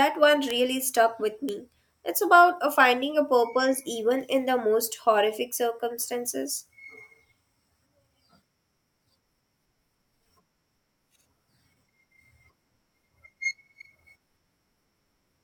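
Speech clip with three bit error spikes: single sharp ticks at 0.51 s, just before "stuck with", at 1.49 s, just after it, and at 4.21 s, between "a finding a purpose" and "in the most horrific". Each is a one- or two-sample jump from a flipped bit, peaking at about -11 dBFS for the first two and about -29 dBFS for the third.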